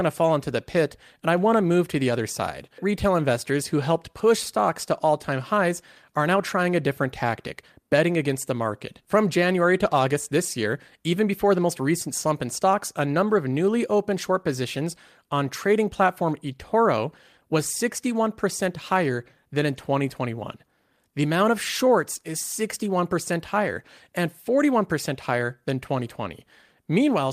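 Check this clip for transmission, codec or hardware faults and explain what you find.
No transmission, codec or hardware faults can be heard anywhere in the speech; the signal stays continuous and steady in level and tone throughout.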